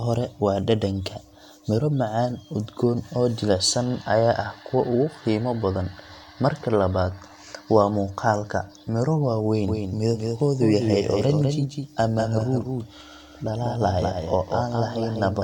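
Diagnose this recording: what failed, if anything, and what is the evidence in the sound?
A doubled audio track appears at 9.68 s, right after "miro waaweyn", and runs to the end. The likely cause is the same speech being captured a second time through a slower path in the capture or routing chain. A full-band copy trails about a fifth of a second behind, a few decibels quieter. It starts abruptly and has no decay or room colour.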